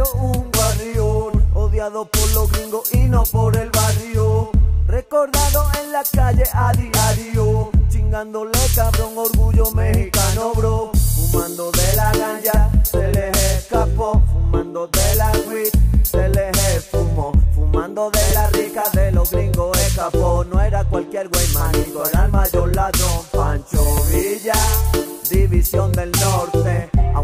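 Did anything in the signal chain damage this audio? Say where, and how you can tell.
Yes, at the driver or buffer stage there is a repeated buffer at 18.30 s and again at 23.98 s. Each is a brief click with a hard join, where a 5.8 ms piece of sound plays twice in a row, which fits a 256-sample buffer. New audio failed to reach the device in time, so it replayed the previous buffer once. That replaced the audio due at that moment and lost a few milliseconds at each point.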